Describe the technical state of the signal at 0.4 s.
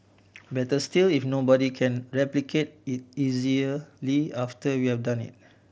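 At 0.4 s the signal is intact, with the speech coming through the Bluetooth mSBC headset path as wideband audio limited to 8 kHz.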